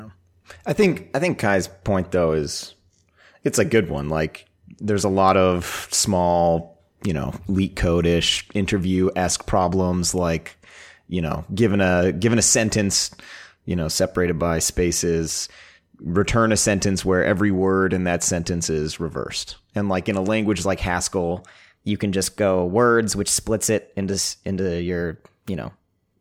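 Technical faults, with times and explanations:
21.31–26.20 s: wrong sample rate. From just after "in a language like" to the end, the speech runs about 1.09 times fast and sits roughly 1.5 semitones high, which fits 44.1 kHz material played back at 48 kHz without conversion, so speed and pitch rise together.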